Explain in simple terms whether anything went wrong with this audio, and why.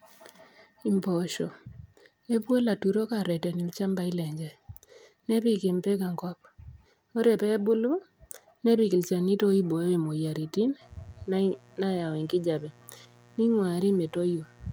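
Electrical spikes from the 60 Hz mains supply leaked into the recording, causing mains buzz: a steady, raspy hum from 10.81 s, just after "nepik ilchanito oibooyo moyiaritin", to the end.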